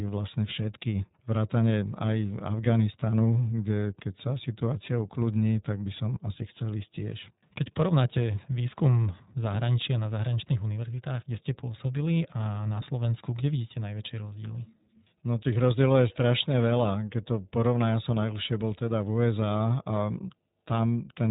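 Speech, and the whole thing has gone through the iLBC codec, with clearly audible damage: nothing above 3.8 kHz, so it sounds narrowband and boxy, plus a rough, slightly synthetic edge from each short frame being coded independently, which fits iLBC's 20 ms mode.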